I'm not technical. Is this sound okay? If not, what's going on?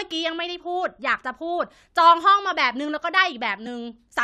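No. At 3.66 s the speech jumps forward. This is compressed frames skipped. A piece of the compressed file, likely one 23 ms frame, was missing or damaged. About a fiftieth of a second never plays.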